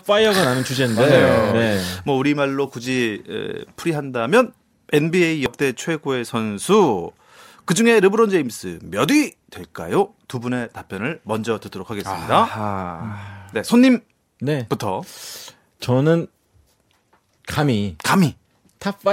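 At 5.46 s the speech shows what is likely a dropped buffer (overrun): the recording software failed to read its samples before the hardware overwrote them. Around 40 ms of audio is lost, and the sound jumps straight ahead without any gap of silence.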